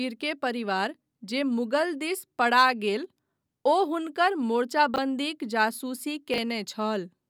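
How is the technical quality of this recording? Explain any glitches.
The recording has two brief glitches, both chunks out of order. At 4.94 to 4.98 s and 6.34 to 6.38 s, one 20 ms chunk of speech arrived late and played after its successor, causing a jumbled blip.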